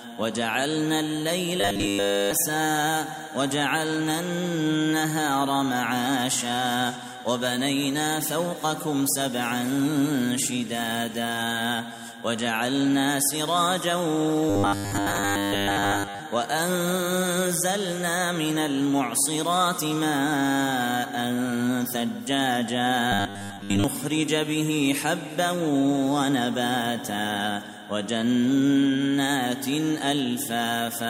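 A rigid, metallic 100 Hz buzz appears at 1.61–2.33 s, 14.50–16.20 s and 23.12–23.84 s. This is robotic sound from repeated short buffers, likely a 10 ms chunk looping while most real audio is skipped.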